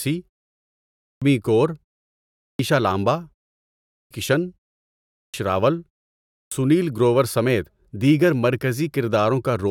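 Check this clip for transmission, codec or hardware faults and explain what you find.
The speech has one fault, repeated five times. There is a clipped start after a pause at 0.94, 2.33, 3.8, 5.03 and 6.22 s. The output device sleeps during each 0.4–0.73 s pause and wakes late. This swallows about 0.26–0.31 s of onset, so speech bursts in abruptly, missing its first sounds. The pauses fall silent as expected.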